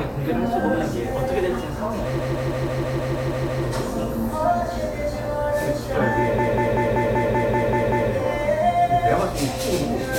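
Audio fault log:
2.19–3.63 s, repeated frames: a 160 ms block, which fits five compressed frames, plays nine more times, stuttering at a 160 ms repeat rate and adding 1.44 s.
6.38–8.11 s, repeated frames: a 192 ms block, pointing to six frames, loops nine extra times for a 192 ms stutter, lengthening the audio by 1.73 s.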